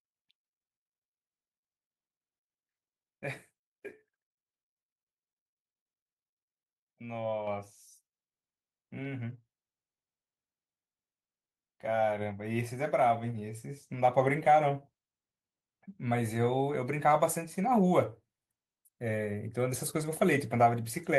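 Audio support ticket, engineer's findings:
Microphone volume stepped up at 7.47 s: speech and room noise jump together by about 5 dB in one instant step. Likely the call software's auto gain pushing the device input level up. Call-codec band limit around 12 kHz, consistent with Opus.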